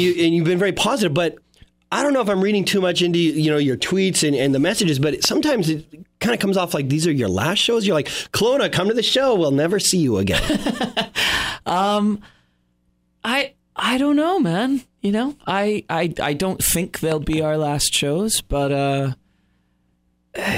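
A loud pop hits at 5.25 s, then a pair of pops at 17.12 to 17.35 s, each jumping well above the sound, which carries on underneath rather than dropping out, unlike a gap or glitch. This points to likely a voltage pulse from a plug, switch or static.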